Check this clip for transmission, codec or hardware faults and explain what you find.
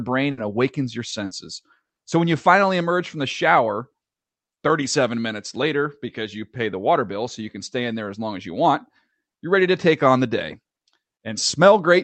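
There are two kinds of transmission fault here, both from packets going missing on the way. All of them sit in the first two seconds. The call codec path itself is doing its job, with the top end stopping around 8 kHz the way a band-limited call codec like Opus would leave it.

Burst of packet loss, at 0.31 to 0.39 s, just before "awakens your", and again at 1.25 to 1.33 s, just after "awakens your". Each time a run of packets failed to arrive in time. The receiver stretched the last bit of sound and faded it out, which you hear as a held buzz or dying hiss lasting roughly 60 ms. The speech then picks up further along, with a chunk of about 60 ms simply gone.

Short concealed packet loss, at 1.09 to 1.13 s, just after "awakens your", then 1.85 to 1.91 s and 1.93 to 1.99 s. These gaps are smaller, about 20 to 40 ms. The decoder patched each one by continuing the previous sound, from its pitch or as shaped noise, then cross-faded back into the real signal. 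Each one comes across as a quick smear or little wobble. The last two are nearly back to back.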